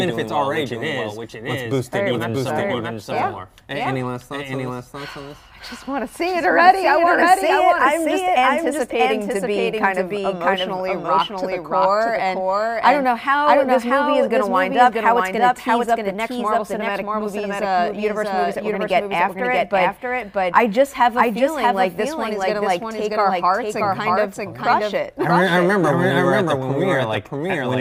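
From start to finish a doubled audio track runs underneath, a second full-band copy trailing by about 0.7 s at roughly equal level, likely from a second, slower capture path. On a waveform every event appears twice, and a spectrogram shows each shape repeated, identical and undecayed.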